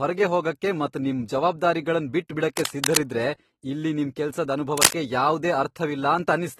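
AAC compression affects the whole of this speech clip, plainly audible as a dull, smeared sound. The damage is consistent with AAC-LC at a low bitrate, around 27 kbps, where the encoder quantises its frequency lines coarsely against a hearing model, pulls the bandwidth down and leaves gaps in the spectrum. Cable scratch noise breaks in twice: from 2.57 to 2.97 s, roughly as loud as the speech, and from 4.77 to 4.93 s, just after "ಇಲ್ಲಿ ನಿಮ್ ಕೆಲ್ಸದ್", somewhat louder than the speech. Each time, dense, uneven bursts of scratching ride over the audio. The likely cause is a worn cable, connector or control carrying a DC voltage being moved, so that its contact resistance jumps rapidly while it is disturbed.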